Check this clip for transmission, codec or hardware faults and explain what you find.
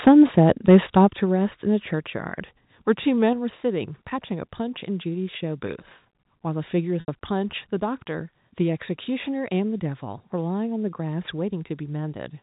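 Three kinds of fault are present: microphone overload, stepped-down microphone volume, and one packet loss covered by pitch repetition. All of it sits on top of G.711 mu-law telephone coding at 64 kbps, which leaves the band cut off at 4 kHz.

Microphone overload appears from 0.07 to 0.11 s and again from 0.38 to 1.0 s. The likely cause is an input level set too high, pushing peaks about 5 dB and about 4 dB past the converter's ceiling. The tops of the waveform get flattened. In the first burst a sizeable share of samples is clipped, and in the longer second stretch only a small fraction is. Both come through as a harsh, crackly edge on the loudest moments.

The microphone volume is stepped down at 0.08 s, 1.08 s and 3.33 s, by about 3 dB, about 7 dB and about 3 dB. The first comes during the first overloaded stretch and the second closely follows the second, which points to the call software likely reacting to the clipping by cutting the device's input gain in a single jump. 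Each step is heard as an abrupt drop in the whole level, with the background falling together with the sound.

Packet loss with pitch repetition occurs from 7.0 to 7.08 s, an 80 ms gap, which fits four 20 ms packets. The receiver fills the hole by repeating the last pitch period and fading it out. Because the gap runs longer than that fade, the repeated cycle first sounds like a short held buzz, then thins to silence. The audio then resumes through a brief cross-fade.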